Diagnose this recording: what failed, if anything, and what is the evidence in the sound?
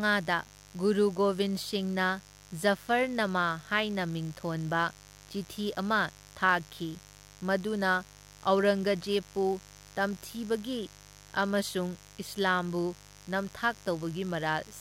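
The analogue wiring side let mains buzz in, and it runs the whole way through the speech. It's a steady, raspy buzz built on 50 Hz, sitting roughly 25 dB under the speech. The edge on it comes from sharp switching spikes, twice per mains cycle, from something like a dimmer, a rectifier or a missing shield. Those spikes spray harmonics of 50 Hz up into the kilohertz range.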